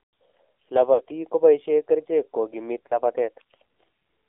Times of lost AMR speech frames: 0.94-1.02, 2.88-2.98

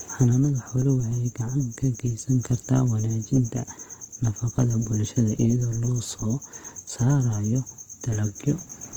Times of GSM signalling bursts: none

